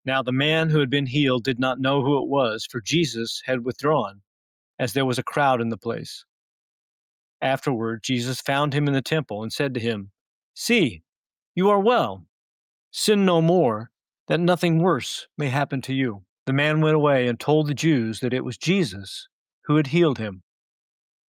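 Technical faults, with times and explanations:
Nothing stood out as a technical problem on listening.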